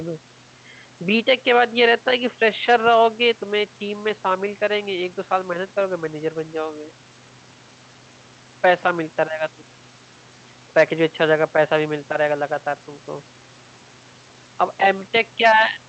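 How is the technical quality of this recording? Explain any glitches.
The recording has no technical glitches, with only the room's own background noise sitting about 29 dB below the speech.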